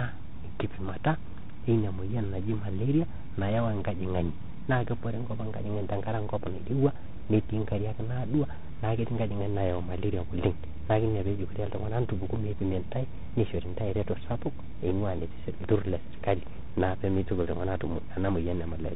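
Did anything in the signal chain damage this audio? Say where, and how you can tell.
Yes, at the codec stage, throughout the clip. This is tandem speech coding. The speech is rough and noisy, with nothing above 3.8 kHz. It passed through G.726 at 24 kbit/s, then G.711 A-law, then CVSD. Each coder re-encoded the previous coder's degraded output.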